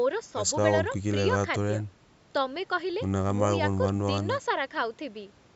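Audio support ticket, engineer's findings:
No faults found in this speech recording. The call microphone processing behaves as expected, with content stopping at 8 kHz and the lowest bass trimmed by its high-pass filter.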